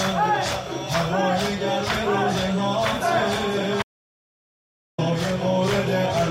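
At 3.83 s the sound cuts off abruptly in mid-flow and does not return until 4.98 s, an audio dropout to silence lasting about 1.16 s. The gap holds silence with no room tone. That points to the input likely being lost, through a disconnect, failed link or stray mute, while recording carried on writing silence. Whatever occurred in that stretch is missing. On a waveform it is a flat line, and on a spectrogram a sharp-edged empty band across all frequencies.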